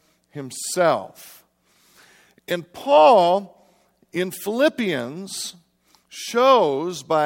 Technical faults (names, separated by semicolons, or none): none